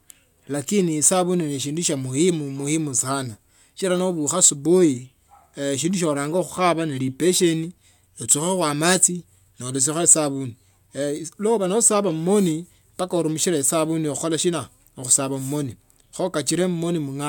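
Hard clipping at 4.44–4.48 s, 9.82–10.13 s and 15.12–15.16 s (after "esabuni kuhkola shina mu"): speech peaks about 5, 9 and 3 dB over full scale are sliced flat, leaving crackle on the peaks.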